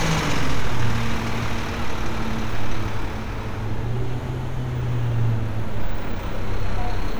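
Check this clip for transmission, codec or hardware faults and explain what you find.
No transmission, codec or hardware faults turn up in this clip.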